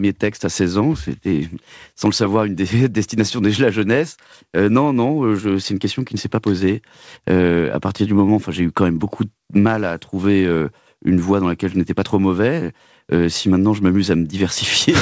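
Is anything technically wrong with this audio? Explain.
Yes. At 12.06 to 12.1 s there are bit errors on an ADPCM link. Flipped bits throw off the decoder's predictor and step size. A rough, popping burst follows.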